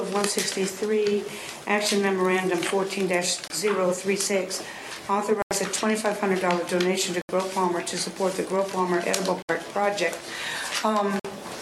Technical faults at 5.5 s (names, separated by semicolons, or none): Bluetooth stall